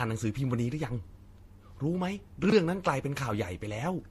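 Transcoding between lossy codecs, throughout: the speech carries layered, smeared coding artefacts, likely from a low-bitrate MP3 re-encoded to Vorbis.

Chunks out of order, 2.44 to 2.52 s: a 20 ms piece of sound plays late, which fits it arriving about three chunks behind, giving a jumbled moment with hard joins.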